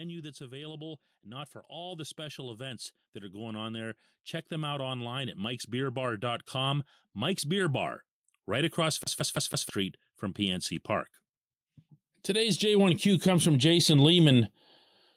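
Automatic gain rising runs from 0.37 to 7.93 s, ending before "right across". The gain control judged the input too quiet. Voice and background swell together by about 14 dB. A second rise, about 6 dB, runs from 12.26 to 14.53 s.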